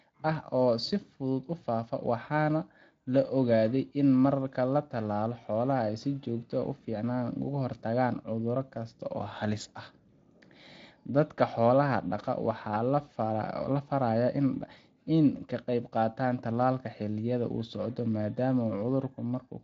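No technical faults are audible.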